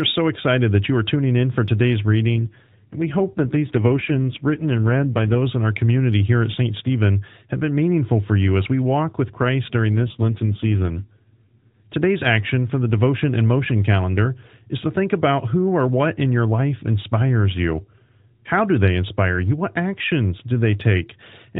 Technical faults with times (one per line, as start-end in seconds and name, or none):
2.36-5.39 AMR rate drop
9.96-11.87 AMR rate drop